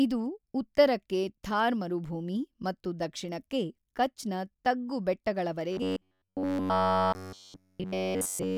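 From 5.72 s until the clip ends at 8.57 s, the speech turns into a stiff, metallic buzz pitched at 93.8 Hz that only loosely tracks the talker, the robotic sound from repeated short buffers. Practically the whole stretch is made of repeats. The likely cause is audio arriving too rarely, so playback keeps looping the last fragment, about 10.7 ms long, while fresh sound is skipped, and that loop rate fixes the buzz pitch.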